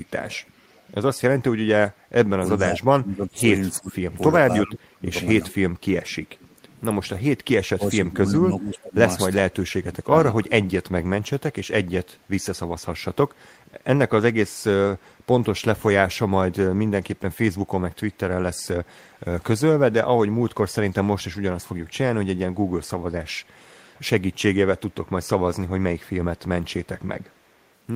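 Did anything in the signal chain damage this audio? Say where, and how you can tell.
Yes, in call processing. The far end's echo canceller, likely on a loudspeaker device, let part of the returned signal through as echo leak. A faint copy of the speech trails the original by 361 ms at 0.08 to 0.81 s, 15.0 to 15.1 s and 27.3 to 27.64 s. It sits about 30, 35 and 40 dB below the direct speech, so it is heard as a delayed ghost.

The same call processing also caused speech suppressed in double talk. With both sides talking at once, the echo canceller likely could not separate the local talker from the loudspeaker echo and attenuated both. Between 1.99 and 10.86 s the speech dips, with the affected stretches totalling around five seconds and the deepest cuts close to 30 dB.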